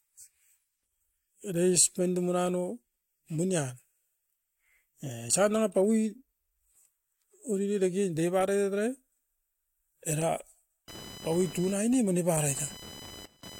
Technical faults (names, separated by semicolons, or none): computer activity noise